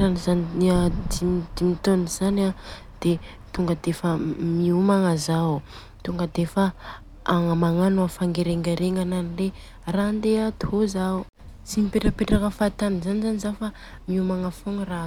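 No technical faults are audible anywhere in the speech recording.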